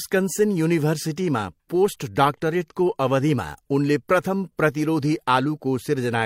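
At 4.46 to 4.50 s, just after "डाक्टरेटको अवधिमा उनले प्रथम", the speech fades into a brief gap of about 43 ms, which fits a single lost frame: AAC frame loss with muting. Overlapping windows taper the silence.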